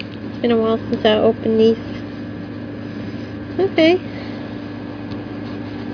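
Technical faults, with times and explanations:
No technical fault can be heard anywhere in the audio, which keeps a steady, intact signal from beginning to end.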